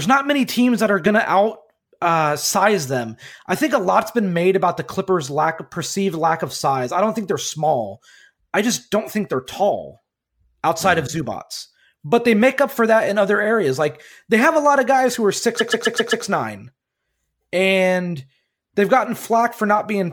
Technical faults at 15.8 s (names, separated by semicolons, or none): repeated frames